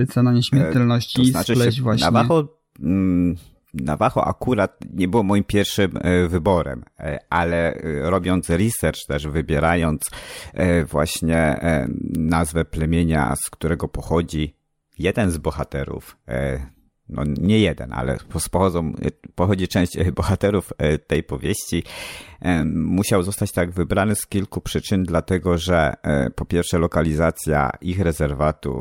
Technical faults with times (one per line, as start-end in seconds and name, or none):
0.47-28.54 clock drift buffer slips